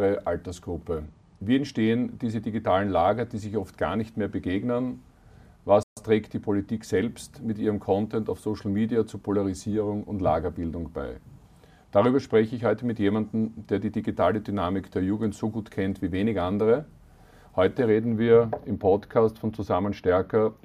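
At 5.83 s the sound stops dead for about 135 ms, a playback stall, likely the player starving of data; the waveform shows a flat gap, the spectrogram a blank vertical band.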